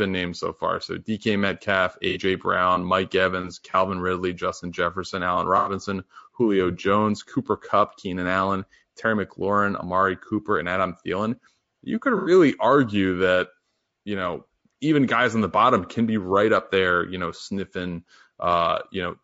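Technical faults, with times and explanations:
Throughout: low-delay AAC compression. The speech sounds rough and grainy, with a hiss filling the gaps between harmonics and a thin, synthetic top band. This is likely AAC-ELD at around 32 kbps, whose very short frames resolve pitch poorly and starve the spectrum of bits.
2.09 to 2.18 s, 3.71 to 3.75 s, 5.57 to 5.72 s and 12.17 to 12.31 s: AAC frame loss with concealment. Each gap leaves a brief smeared, noisy or phasey patch, the last just before "argue that you know". These are lost frames of about 30 to 90 ms, which the decoder patched from the last good spectrum.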